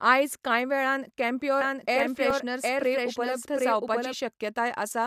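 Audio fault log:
1.61–4.13 s, doubled audio track: a second, full-band copy of the speech runs about 0.7 s behind the original and at roughly the same level, so everything is heard twice. Unlike an echo or reverb, the trailing copy has no decay and no room colour, and it cuts in and out abruptly at the edges of this span. The likely cause is the same signal being captured again through a slower path.
1.84–2.46 s, CD scratch ticks: five short ticks, the longest about 0.7 ms, arrive at a steady rate of roughly six or seven per second, of uneven strength across the run. A blemish on the disc destroys more data than error correction can rebuild on each revolution, so the player patches or mutes those samples once per turn. That regular, rotation-locked spacing sets them apart from random digital clicks or vinyl crackle.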